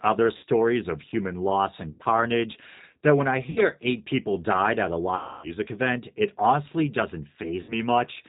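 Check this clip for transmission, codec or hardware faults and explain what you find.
Two problems stand out in this speech: the whole thing has gone through a G.729 codec, and there are five spots of VoIP packet loss concealed by the speech codec.

The G.729 codec is present throughout, at 8 kbit/s. It rebuilds the voice from a vocal tract model, a pitch predictor and a few pulses per frame, with nothing kept above 4 kHz. That leaves the speech dull, roughened and noticeably synthetic.

The packet loss hits at 0.37–0.44 s, 1.91–2.03 s, 3.50–3.62 s, 5.16–5.55 s and 7.62–7.73 s. The decoder stretches its last pitch and filter, fading the gain as it goes. Those stretches turn buzzy and fade, and the voice stays weak for a moment afterwards. The longest, around 5.2 s, fits roughly 270 ms of dropped audio.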